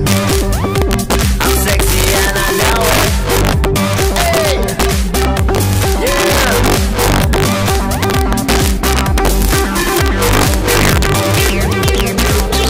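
Integer overflow runs throughout. Peaks driven about 3 dB over full scale wrap to the opposite sign, roughly one percent of samples. Loud moments give harsh, sharp cracks.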